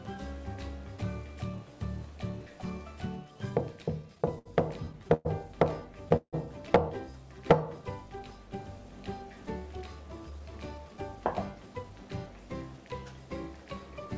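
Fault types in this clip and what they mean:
Repeated stalls (stutter): The audio keeps catching and dragging in two bursts, 4.02 to 4.47 s and 4.85 to 5.27 s, with five hiccups each. Packets were arriving late, so the jitter buffer kept running dry and the receiver stretched the last bit of sound to cover. The gaps run up to 69 ms in the first burst and 114 ms in the second, filling about a quarter and then over a third of each stretch. Nothing is lost; it just stumbles.
Call audio freeze: Around 6.16 s the sound stops moving forward for about 0.16 s. The last bit of audio is held and fades, ending in about 60 ms of silence, then it carries on right where it left off, now 163 ms later than before. The likely cause is packets held up in transit, which emptied the jitter buffer so the receiver had nothing fresh to play. Nothing is missing, but a pause has been inserted.
Jitter buffer speed-up: From 10.30 to 12.27 s the audio runs about 7% fast at unchanged pitch, so it feels slightly hurried. 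The buffer had built up more audio than it wanted, probably because late packets showed up together, so the receiver trimmed out lots of tiny pitch-period-sized slivers to catch up. Around 0.15 s gets shaved off that way. It's all coming through the G.722 call path, so there's nothing above 8 kHz.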